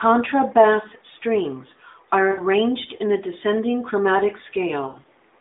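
At 2.32 to 2.41 s, after "strings are", lost AMR speech frames cause a smeared, drawn-out sound for about 60 ms, which fits three 20 ms frames. A plain dropout would cut to silence instead. At 4.88 to 5.05 s, after "in a descending chromatic", losses scattered over 160 ms, with the longest run 80 ms, fade the narrowband sound before it returns weak.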